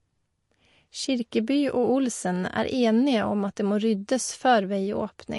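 Throughout the clip, an encoder that was likely short of bits, as MP3 compression at about 48 kbps would be, cuts everything above 11.2 kHz and drops weak frequency detail frame by frame, so the speech sounds dull, watery and swirly, with smeared consonant attacks.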